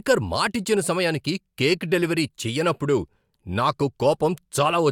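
No technical faults can be heard anywhere in the recording. Nothing in it calls for a timestamp or a repair.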